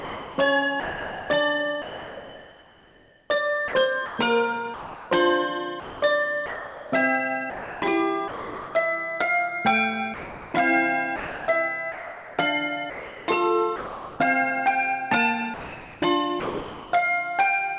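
A voice detector at the sender likely toggled transmission repeatedly, swapping sound for comfort noise from 0.0 to 8.74 s, 10.14 to 14.2 s, and 15.54 to 16.92 s. The audio is chopped there.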